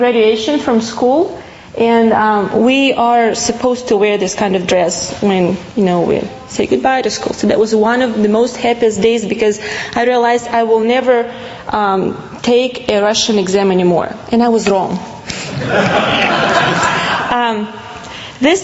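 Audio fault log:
Throughout, gain pumping: the level breathes in time with the sound, the gain ducking by around 15 dB as each loud passage arrives. This is likely a microphone gain set far too high, with a fast limiter or compressor clamping down on each peak and releasing in the pauses, so loud and quiet parts sit squeezed together, within a call band that stops near 8 kHz.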